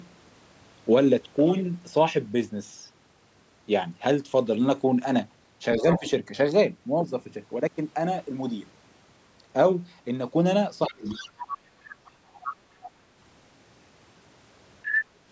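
At 5.78 to 6.07 s the speech dips by roughly 15 dB, with a second voice leaking in underneath from 5.8 to 6.08 s, about 10 dB below. This is speech suppressed in double talk, likely the echo canceller turning down the near talker while both sides spoke. From 10.88 to 11.42 s a deeper cut of roughly 25 dB suppresses about half a second of the talker's speech.

The other side's voice leaking through, likely residual loudspeaker echo the canceller failed to subtract, recurs at 11.05 to 11.57 s, 11.89 to 12.1 s, 12.34 to 12.54 s and 12.84 to 12.89 s, ranging from faint to about 10 dB under the speech. At 14.84 to 14.99 s it reaches roughly the same level as the talker.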